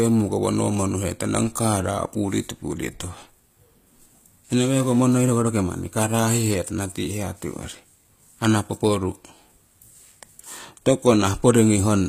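Throughout the speech, the treble is plainly damaged, likely by HE-AAC compression. Only the lower band is truly coded. The upper band is copied up from below and roughly reshaped, so its harmonics misalign. S sounds turn gritty, metallic or lispy. Nothing sounds above 15.4 kHz, which fits about 24 kbps.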